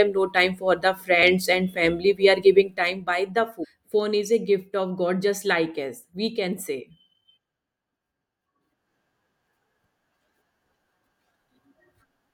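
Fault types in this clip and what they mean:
Damaged data in a compressed stream: parts of the encoded speech arrived corrupted, so the decoder misread those frames and lost sync until it found the next valid frame header. There are two short glitches, one at about 1.22 s just before "and family" and one from 3.63 to 3.65 s just after "by the".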